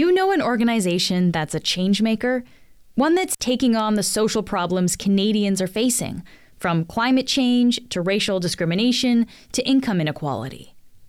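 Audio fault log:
3.33–3.40 s, intermittent contact: The speech drops out abruptly for about 53 ms. A crackle marks the moment the signal breaks and again when it returns. In between, only faint hiss remains. This is the sound of a loose plug or cable losing its connection for an instant. The scraping metal contacts make the crackle. While the path is open, the program signal is gone and only the noise floor is left.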